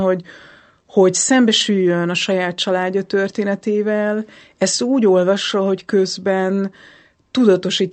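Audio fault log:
No faults are present in the speech, which has passed through a WebRTC call path whose Opus coding limits the audio bandwidth to about 8 kHz.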